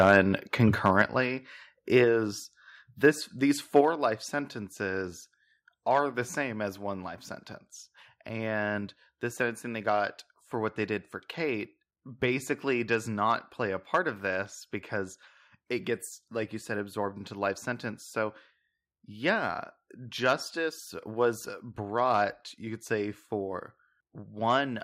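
Right from 0.0 to 0.19 s and again at 0.86 to 1.02 s the speech has a harsh, crackly edge, with peaks about 4 dB and about 2 dB over the limit, likely microphone overload clipping the tops. At 1.02 s and again at 3.81 s, between "this these" and "life sentences are the", everything drops by about 5 dB in one step, likely the microphone volume being stepped down by the call software.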